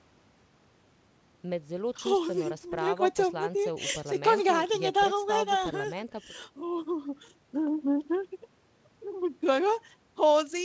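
Nothing here stands out as a fault: the speech comes over a WebRTC call path, and the way everything above 8 kHz is missing fits a wideband call codec such as G.722.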